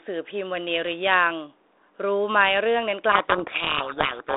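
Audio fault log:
3.12 to 4.36 s, codec payload misread: From 3.12 s to the end, the speech sinks under harsh, grinding distortion. The receiver is reading each G.726 code word with its bits in reverse order. So most samples' difference values are wrong. The adaptive predictor then follows the wrong values and tracks the wrong signal. Before this, the sound carries light codec roughness within a 300 Hz to 3.7 kHz telephone band, which fits 32 kbit/s G.726.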